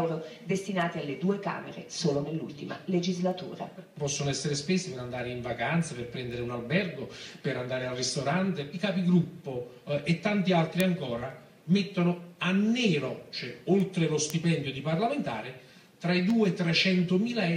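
A receiving device running on its own clock, unlocked to the sender's word clock, slips against the incoming digital stream by roughly 50 parts per million. Each slip misreads a few samples and drops or repeats one, producing word clock ticks from 0.31 s to 17.3 s. They arrive at a steady rate of about one every half second, around forty in all, as short, sharp clicks of uneven strength laid over the sound.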